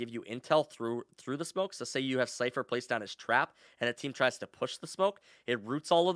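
No technical fault can be heard anywhere in the speech recording, which stays continuous and intact from its first moment to its last.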